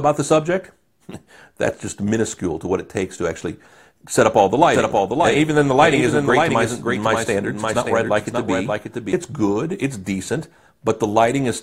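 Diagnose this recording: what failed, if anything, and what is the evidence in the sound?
From 4.74 to 9.12 s there's a doubled audio track: a dry full-band copy about half a second behind, roughly 5 dB down, likely a slower second capture path.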